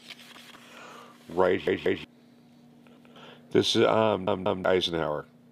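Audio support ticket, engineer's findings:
Playback device starved, last buffer replayed: repeated buffer at 0.37–0.56, 1.67–2.04, 2.97–3.16, 4.27–4.64 s. Each 186 ms block, fitting an 8192-sample buffer, sounds once or twice extra with hard joins, a stutter that drops roughly 0.2–0.4 s of audio.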